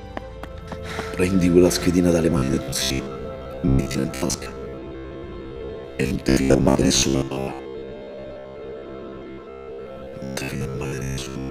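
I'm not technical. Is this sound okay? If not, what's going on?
No. From 2.3 s to the end, there's robotic sound from repeated short buffers: a rigid 67 Hz buzz, likely from roughly half the audio being replaced by repeated 15 ms snippets.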